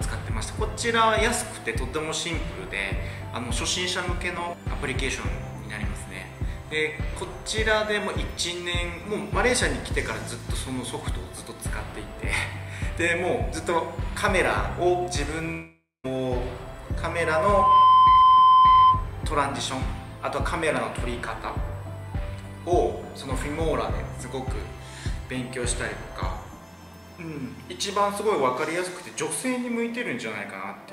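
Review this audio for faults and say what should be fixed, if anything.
Long network dropout, 15.51 to 16.06 s: the sound breaks off and is replaced by a decaying buzz-like continuation of the last moment, which fades to about 170 ms of silence before normal audio resumes. Roughly 0.52 s of material is simply gone, never replayed, which is most likely a stall in packet delivery covered by the receiver's concealment. A more robust connection, with a larger jitter buffer or forward error correction, would prevent this.

Loudspeaker feedback squeal, 17.10 to 19.09 s: a 1 kHz tone swells over roughly 0.7 s and then holds at about 15 dB above the program sound. The microphone is hearing the loudspeaker it feeds, and at 1 kHz the loop gain has passed unity, so that frequency keeps growing around the loop until something caps it. Lowering monitor gain, separating or aiming the microphone away from the speaker, or adding a feedback-suppression notch near 1 kHz would stop it.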